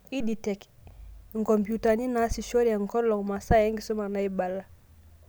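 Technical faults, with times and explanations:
3.44 s, underrun with held sample, just after "naasishore enkolong'": the buffer ran dry for 2.9 ms, fitting a 128-sample block; output held flat, then resumed without loss, so only a faint break.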